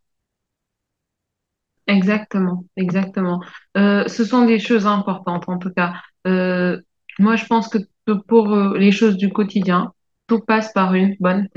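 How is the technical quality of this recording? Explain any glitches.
Nothing here needs explaining: the speech comes through with no glitches or technical faults that stand out to the ear.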